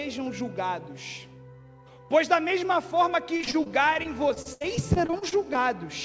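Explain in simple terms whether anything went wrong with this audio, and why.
Between 3.34 and 5.64 s the sound turns choppy and robotic: repeated packet loss. About twenty short holes, none longer than 72 ms, were patched by stretching the previous sound. Unlike one single dropout, the gaps keep recurring close together.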